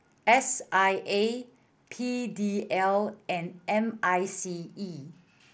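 The speech comes over what sounds like a Bluetooth mSBC headset link, with the bandwidth topping out around 8 kHz and a faint graininess on the louder passages, and no technical fault can be heard anywhere in the signal.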